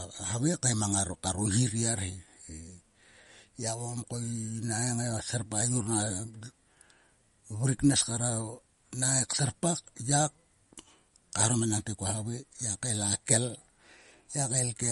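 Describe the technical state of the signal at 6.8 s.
At 6.8 s the speech carries MP3 compression damage, present across the whole clip rather than at this moment alone. Nothing reaches above 11.2 kHz, and the texture is watery and swirling, with sibilants turning metallic and consonant onsets smeared. The likely cause is an encoder short of bits, consistent with a low rate near 48 kbps. It cuts the treble at a fixed point and discards weak frequency components, which flicker on and off between frames.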